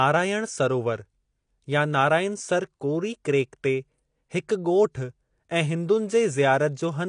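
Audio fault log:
Throughout, AAC compression: the speech was likely passed through an AAC-LC encoder at a low bitrate, and the damage is plainly audible. With too few bits per frame, the encoder discards content above 10.1 kHz and quantises the remaining bands coarsely. That leaves the speech dull and smeared, with a warbling, fizzy texture where fine high detail used to be, which fits a bitrate around 32 kbps.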